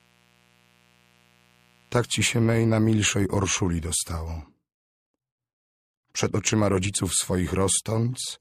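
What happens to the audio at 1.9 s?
At 1.9 s the sound carries a mains buzz, present from 0.0 to 2.56 s: sharp switching spikes at twice the 60 Hz mains rate give a steady, raspy buzz roughly 35 dB below the sound, seen on a spectrogram as evenly spaced 60 Hz harmonic lines reaching several kHz.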